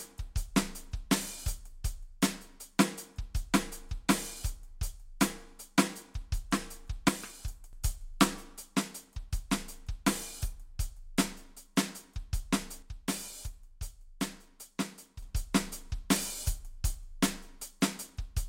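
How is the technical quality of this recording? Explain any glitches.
The recording has two clear glitches in the music, both from the same fault: one channel drops out, likely because one side of the stereo feed was briefly lost. The first runs from 7.08 to 7.73 s, the second from 12.82 to 15.22 s. With only one side feeding the mono sum, everything common to both channels falls abruptly by about 6 dB, and anything carried only on the missing side vanishes. Each gap is an abrupt dip in level that snaps back at its end.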